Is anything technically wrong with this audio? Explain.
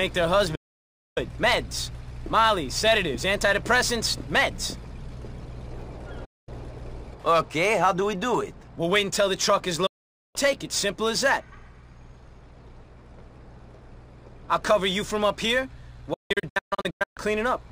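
Yes, there are four digital broadcast dropouts, at 0.55–1.18 s, 6.25–6.49 s, 9.86–10.36 s and 16.14–17.18 s. The receiver loses frames and mutes with an 8 ms fade, so the sound simply vanishes. The last one breaks into several short holes, the longest 160 ms.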